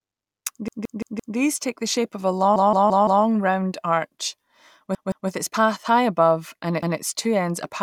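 Fresh audio repeatedly failed to reach the device in time, so it replayed its last 171 ms block, which fits an 8192-sample buffer. Each repeated buffer is a hard-joined stutter: four extra plays at 0.68–1.37 s and at 2.56–3.24 s after "the shape of a", two at 4.95–5.29 s before "its path high above", and one at 6.83–7.00 s before "two ends apparently beyond".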